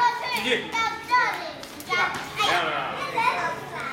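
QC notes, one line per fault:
Nothing to flag here; this one's all good.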